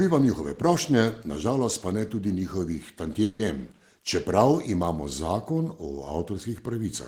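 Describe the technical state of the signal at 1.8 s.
At 1.8 s the speech signal is intact, with no audible fault at that point.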